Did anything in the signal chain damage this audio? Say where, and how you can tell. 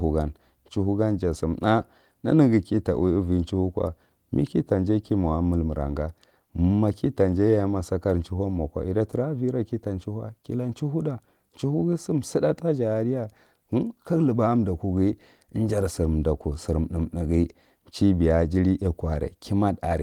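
No, the signal chain is intact: the speech comes through Opus voice compression at 24 kbps in hybrid mode with only light coding damage, and content still reaches up to about 20.2 kHz.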